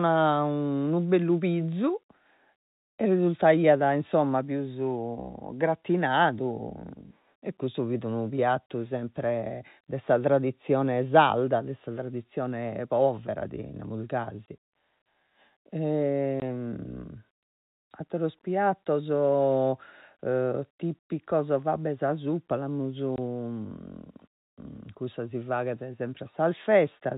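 Packet loss filled with silence at 8.66 s (after "e custu fit unu"), 14.46, 16.4 and 23.16 s: each lost 20 ms packet leaves a hard-edged hole.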